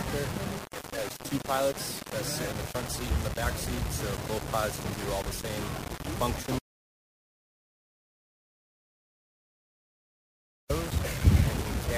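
Low bit depth without dither runs from start to finish: the grain suggests the signal was likely rounded to about 5 bits with no dither. The error tracks the signal, sitting only around 10 dB below it, so everything sounds coarse and the quietest passages sputter or collapse.

An audio dropout to silence runs from 6.59 s to 10.70 s, about 4.2 s of dead digital silence with no background at all. The input was likely lost while writing continued with silence, so the sound cuts out abruptly and resumes mid-flow.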